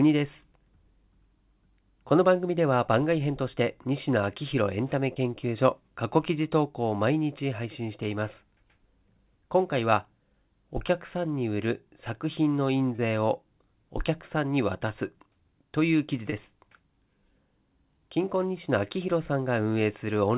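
Brief smears or wobbles interrupt the speech at 5.14 to 5.18 s, 12.96 to 13.00 s and 16.30 to 16.34 s, each a short concealed packet loss. In each case about 20 ms of the call arrived too late for the decoder. The receiver filled the gap by extending the preceding sound for roughly that long, then crossfaded back into the real signal. All of this sits within narrowband call audio with nothing above 4 kHz.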